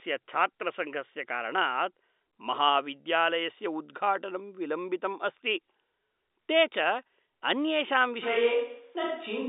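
At 8.24 s the sound turns abruptly roomy and hollow and stays that way to the end, which points to a switch to a distant microphone, likely because the close microphone's feed dropped out. The level hardly changes, but bass thins and a room noise floor appears, roughly 35 dB below the speech. On a spectrogram, the low end weakens and the gaps fill with reverberant smear within the telephone band, which tops out near 3.8 kHz.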